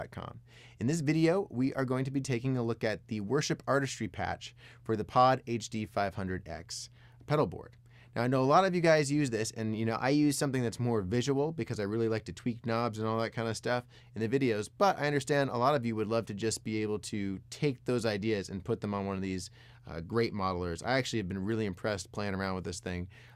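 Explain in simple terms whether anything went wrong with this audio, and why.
From 9.90 to 10.51 s the sound abruptly plays about 5.7% faster and nearly a semitone higher, then snaps back. This is a drift correction step, likely clock-matching software briefly speeding playback to balance its buffer. Unlike wobbly tape flutter, it's one clean jump, not a waver.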